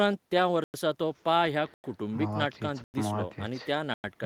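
Speech, with a lost packet rebuilt from error correction at 0.37–0.39 s: a 20 ms stretch turns rougher and noisier, consistent with one packet replaced by its low-bitrate redundant copy. There is also a gap between chunks: 100 ms silences at 0.64, 1.74, 2.84 and 3.94 s, which points to 1-second chunks played back with silence inserted at each join.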